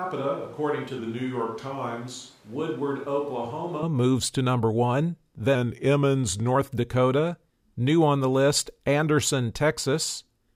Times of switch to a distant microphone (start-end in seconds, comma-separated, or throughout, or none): 0.00-3.83